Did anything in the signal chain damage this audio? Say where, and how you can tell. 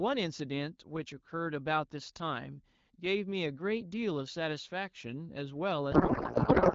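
Yes. A codec payload misread at the codec stage starts at 5.92 s and runs to the end. The speech turns to garbled warble and noise that barely tracks it. The frames look like octet-aligned AMR read as bandwidth-efficient, so every field is parsed from the wrong bits. On a spectrogram the harmonic structure gives way to smeared, patternless energy, while the earlier AMR wideband speech looks cleanly banded.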